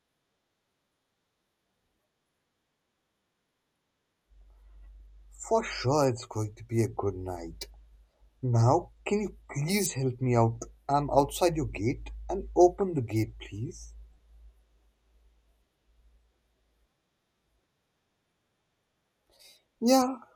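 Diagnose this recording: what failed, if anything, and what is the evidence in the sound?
DAB burbling, at 10.75 s and 12.78 to 12.81 s. Weak reception let bit errors corrupt MP2 sub-band samples, causing short blips of noise over the speech.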